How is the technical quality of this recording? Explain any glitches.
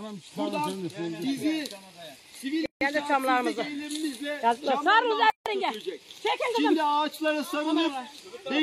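The recording has two dropouts, both gaps at a join of encoded pieces. At 2.66–2.81 s and 5.30–5.46 s the sound breaks off in gaps of 154 ms and 159 ms, then resumes where it stopped. Separately encoded segments were joined untrimmed, leaving encoder start delay and last-frame padding in place. The gap edges are smeared by the codec.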